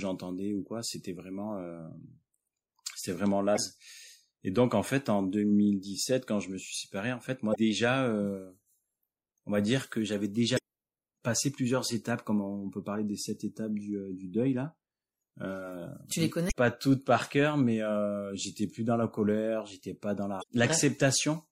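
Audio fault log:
Throughout: MP3 compression. The speech sounds watery and swirly, with dulled treble and smeared consonant onsets, plainly audible damage. Likely a low bitrate, around what 64 kbps gives, forcing the encoder to cut high frequencies and drop weak spectral lines that flicker between frames.
3.54 to 3.59 s, 7.51 to 7.56 s, 10.54 to 10.59 s, 16.47 to 16.52 s, 20.39 to 20.44 s: damaged data in a compressed stream. Each is a brief chirp, squawk, click or short hole lasting about 45 ms. Corrupted bytes make the decoder misread frames, lose sync and hunt for the next valid header.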